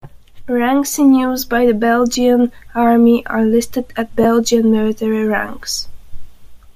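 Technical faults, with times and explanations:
2.13–2.15 s and 4.23–4.26 s, lost LE Audio frames: about 15 ms drops out each time (fits two 7.5 ms frames), and the decoder papers over it with recycled spectrum, leaving a brief noisy smear.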